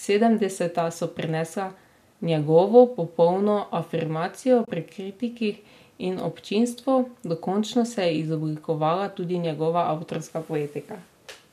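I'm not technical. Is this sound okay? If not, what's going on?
No. Right after "njegovo popolno afirmacijo", from 4.65 to 4.68 s, the speech briefly drops away and returns, a soft gap of about 30 ms. This is AAC frame loss with muting: a few compressed chunks of audio went missing, and the player filled them with silence.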